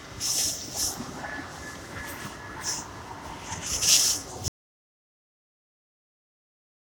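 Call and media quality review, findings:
Audio dropout to silence at 4.48 s, running to the end of the clip. Sound cuts mid-flow into silence, no room tone at all. Likely input loss (device disconnect, link failure or stray mute) while the encoder kept writing silence; anything after 4.48 s is gone.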